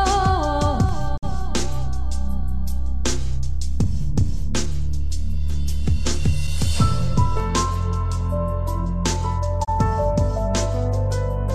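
A DC step arrives at 0.89 s, when the waveform's zero line suddenly jumps to a new offset, as happens when a converter recalibrates or an input carrying DC is switched into the path. That shift registers as a low thump at 0.89 s. The displaced baseline then holds until 7.40 s, and the sound riding on top carries on unchanged throughout.

A digital broadcast dropout cuts the audio at 1.16 s, within the offset stretch, and lasts until 1.25 s. The receiver failed to decode valid frames and muted until good ones returned. The sound fades out over about 20 ms, leaving a hole with 48 ms of programme lost, which fits two frames of about 24 ms each. A second dropout at 9.63 to 9.69 s removes 24 ms, consistent with one frame, again with a 20 ms fade.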